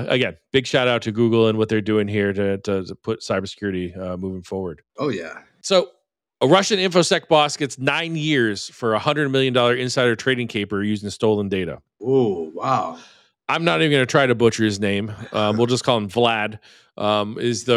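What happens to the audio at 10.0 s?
Nothing goes wrong at 10.0 s: the speech continues without any dropout, click or distortion at that point.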